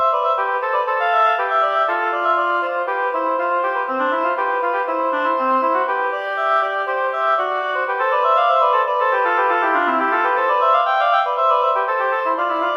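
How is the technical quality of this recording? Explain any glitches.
No glitches turn up anywhere in the recording, and its technical quality holds steady throughout. There are no dropouts, jumps or interruptions to point to at any moment.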